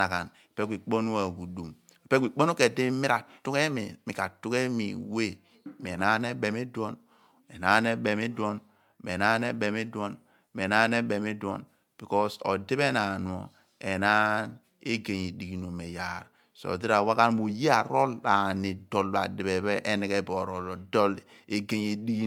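The speech was likely run through MP3 encoding and decoding about seven times, consistent with a 128 kbit/s chain. That is generation loss: quantisation noise and spectral holes pile up, making the sound swirly, smeared and hollow throughout, with blurred attacks and nothing above 20.1 kHz.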